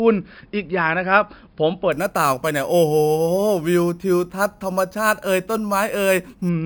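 Speech with imaging from sample-and-hold upsampling, 1.92 to 6.49 s: a metallic fizz about 18 dB down, around 5.5 to 11 kHz, pointing to 11 kHz audio held up to 44.1 kHz. Unlike steady hiss, it rises and falls with the speech.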